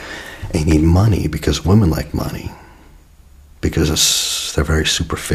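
A sudden voltage step, likely from a plug, switch or static discharge, is added to the signal. This produces a loud pop from 0.71 to 0.75 s, well above the surrounding audio, then a softer double pop between 3.94 and 4.15 s, with the sound continuing underneath.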